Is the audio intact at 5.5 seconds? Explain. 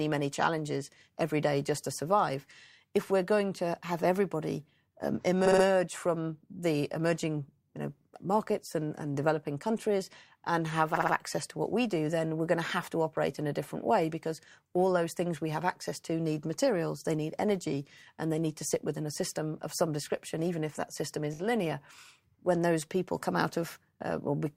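No. Just after "to have everybody um", from 5.45 to 5.64 s, the speech stutters: a 60 ms slice of sound plays three extra times before the clip resumes at "from the emerging you". This is repeated frames. A short run of compressed frames, which fits a block of about three, was written or sent more than once, so the decoder played the same audio again. Each repeat adds to the length, 180 ms in all.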